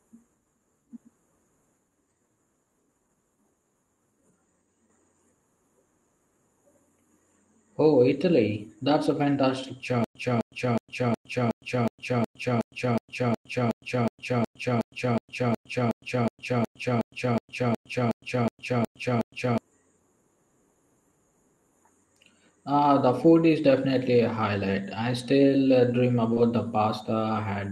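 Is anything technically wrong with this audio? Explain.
Yes, there are three faults, with the sound passing through an Opus call path whose bandwidth stops at about 12 kHz.

From 10.04 s to 19.58 s there is a stutter with silent gaps. A fragment about 257 ms long plays, then about 110 ms of dead digital silence follows, and the pair repeats every 367 ms or so, 26 times in all. The likely cause is a player or stream stalling, replaying its last buffered chunk on each retry and then running dry. Whatever should have played in those nine or so seconds is gone. Unlike a concealment smear, the repeats are identical and evenly spaced, and the gaps are true silence rather than filled-in sound.

From 26.33 s to 26.38 s there is short concealed packet loss. About 20 ms of audio failed to arrive in time, and the receiver covered roughly 26 ms by extending the preceding sound, then crossfading back. 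It is heard as a brief smear or wobble rather than a gap. It happens once and lasts only a few hundredths of a second, which separates it from the repeating, silence-broken stutter earlier.

Overlapping its tail, from 26.36 s to 26.38 s, is a lost packet rebuilt from error correction. That 20 ms stretch fits a single lost packet recovered from the lower-quality copy carried in the following packet by Opus in-band error correction, so nothing drops out. The rebuilt frame sounds rougher and noisier than its neighbours. Unlike the concealed section, it contains real, if coarser, audio rather than an extrapolated guess.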